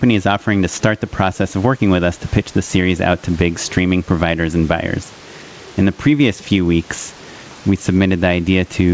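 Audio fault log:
throughout, gain pumping: the gain swings by around 10 dB, pulled down under every loud stretch of speech, squashing the level range, likely from mic gain set far too high with a fast limiter. Steady room noise, about 35 dB down, would not rise and fall with the speech gaps this way.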